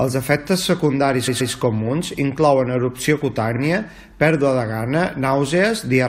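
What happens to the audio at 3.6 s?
Right after "secundaris comuns inclouen erupció", repeated frames occur from 3.55 to 3.59 s. A 43 ms block plays twice, causing a brief stutter. The audio runs 43 ms longer.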